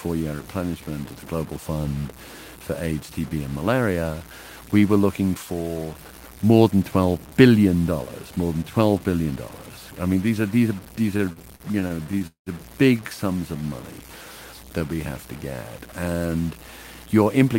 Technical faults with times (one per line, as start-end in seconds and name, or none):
0.00-17.59 low bit depth without dither
11.17-12.49 repeated stalls (stutter)
13.57-14.07 jitter buffer slow-down
16.99-17.54 jitter buffer speed-up